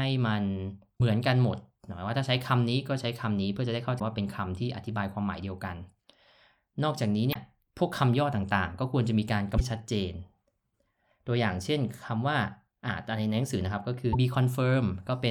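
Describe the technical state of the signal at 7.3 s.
At 7.30 s the speech is interrupted by damaged data in a compressed stream. It lasts about 50 ms, ending at 7.36 s. Part of the encoded stream is corrupt there, with bytes lost, zeroed or overwritten. The decoder cannot read those frames correctly. It loses sync and searches for the next valid frame header before normal playback resumes. The result is a short, harsh blip or squawk cutting across the speech.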